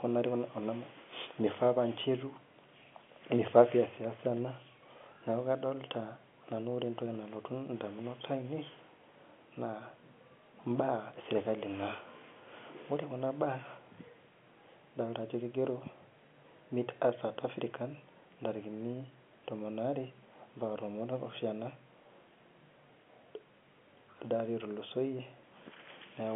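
No technical faults can be heard in this speech recording, which carries the narrow band of ordinary G.711 telephone coding, with sound confined to roughly 200 Hz to 3.4 kHz as a normal phone line delivers it.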